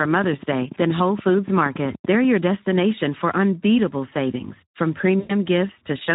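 Throughout, the Speex codec is working at a low setting, which fits about 11 kbps. The CELP coding leaves the speech plainly hoarse and noisy.

From 5.19 to 5.34 s, just after "for unbeatable savings from", packet loss is concealed by the speech codec. The decoder stretches the last pitch and filter into a fading buzzy tone or coloured noise, consistent with about 100 ms of lost audio.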